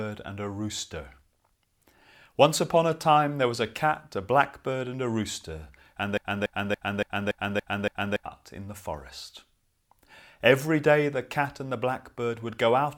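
At 6.18 s, after "and a rooster and", a broken-record loop starts. A 284 ms fragment repeats seven times until 8.26 s, likely from a stalled stream.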